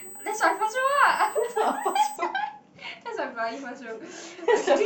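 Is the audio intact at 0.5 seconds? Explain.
No. At 0.5 s you're inside a stretch of USB whine that runs from the very start to about 2.16 s. It's a steady, fixed-pitch tone at 8 kHz, sitting roughly 20 dB under the speech, a thin, high squeal. That pitch matches the USB bus's 125-microsecond microframe timing: current pulses at that rate leak into the audio through the power or ground path and ride along with the signal.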